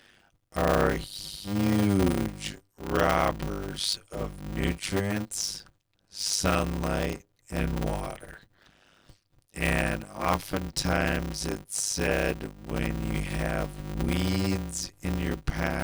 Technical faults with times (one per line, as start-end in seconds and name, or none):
0.00-15.84 block size mismatch (padded)